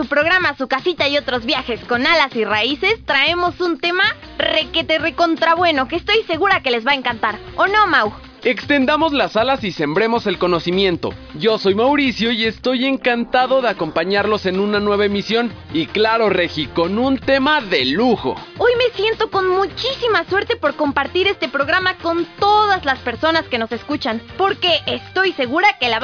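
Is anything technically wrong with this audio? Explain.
No, the signal shows no technical faults that a listener can pick out anywhere in the recording.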